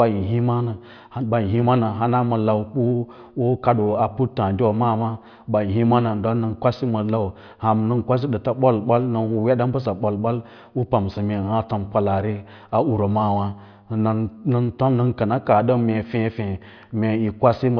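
Across this speech recording there are no technical faults to report: the signal holds steady throughout with nothing audible going wrong in it.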